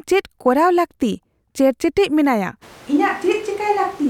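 Speech that turns roomy and hollow from 2.64 s to the end, likely a switch to a distant microphone, with the waveform dropping about 5 dB and the spectrogram showing thinner lows and a raised noise floor.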